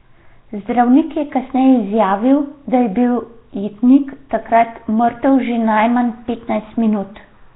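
From start to finish the speech has a rough, hissy halo and a smeared, underwater feel, with nothing above 3.9 kHz. That's heavy Nellymoser compression, likely from the old Flash codec at a rate fitting 16 kbps, starving weak bands and filling them with noise.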